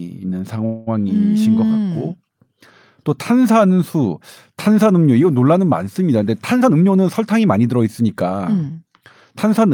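From 0.65 to 0.89 s there is a call audio freeze. The last bit of speech is stretched into a fading buzz or hiss that fills about 214 ms and never drops to silence. The speech then resumes exactly where it stopped, with nothing skipped, so only a gap has been added. That is what separates it from a packet-loss dropout, where speech would be missing. The likely cause is packets held up in transit until the jitter buffer ran dry.

From 6.60 to 8.47 s comes a jitter buffer speed-up. The speech plays at about 111% of its normal rate and sounds hurried, while the pitch stays put. Unlike a resampling or tape-speed error, it doesn't rise in pitch. The receiver repeatedly cut out tiny pitch-period-sized slices, removing roughly a fifth of a second in total, to drain an overfilled buffer and bring the delay back down.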